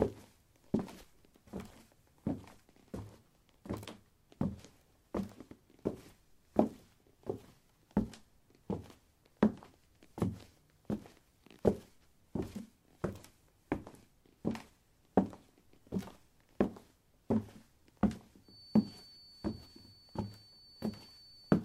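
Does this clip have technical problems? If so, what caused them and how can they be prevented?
Yes, a feedback whistle: a thin 4.5 kHz tone from 18.40 s to the end, well below the sound, likely from a speaker-to-mic loop hovering at feedback. Lower gain or move the mic.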